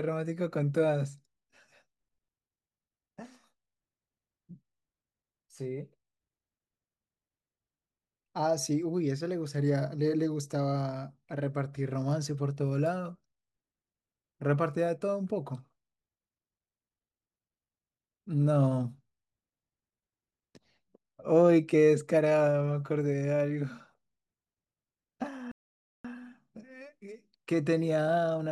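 At 25.52 s the speech cuts out in mid-flow and falls silent for about 0.53 s, until 26.05 s. This is a playback stall. The gap is silence. The likely cause is that the player ran short of incoming data, or its output thread was held up. Playback then resumed once data was flowing again.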